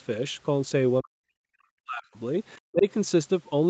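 Speech that sinks sharply from 1.01 to 1.36 s, 1.55 to 2.18 s and 2.57 to 2.87 s, by up to about 40 dB and about 25 dB in the last, is likely speech suppressed in double talk.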